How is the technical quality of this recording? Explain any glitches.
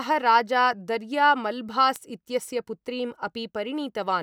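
The recording has one clear technical fault: word clock ticks running through the speech. The first tick lands at 0.57 s and the last at 3.35 s. There are three in total, roughly one and a half seconds apart. They are short, sharp clicks at a steady pace, and their strength is uneven. The receiving device was running on its own clock, not locked to the sender's. The two clocks differed by only a tiny amount, around fifteen parts per million. Each time they slipped a full sample apart, one sample was dropped or repeated, producing a tick.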